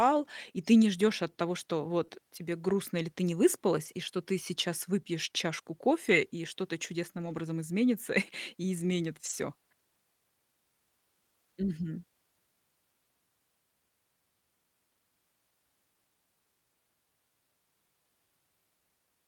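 At 2.05 to 2.10 s there is short concealed packet loss. About 20 ms of audio arrived too late for the decoder. The receiver extended the preceding sound to cover the hole, then blended back. It comes across as a brief smear.

Lost packets rebuilt from error correction follow. At 3.86 to 3.88 s, after "грустно или ты не" and before "и что ты сейчас", one 20 ms frame was lost. The next packet carried a low-bitrate copy, and the decoder played that instead. At 6.10 to 6.12 s, after "ты сейчас выпьешь чашку", another 20 ms frame is replaced the same way. The longest stretch runs from 7.18 to 7.40 s, about 120 ms, which fits six separate lost packets. At 9.26 to 9.32 s, after "и изменит", 40 ms is rebuilt. Nothing drops out. Each spot sounds rougher and noisier than its surroundings.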